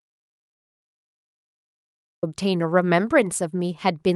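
Audio dropout to silence runs from the start to 2.23 s of this speech recording: silence without room tone, likely because the input was lost while silence kept being written. Speech then resumes, band-limited near 12 kHz, which fits an Opus call path.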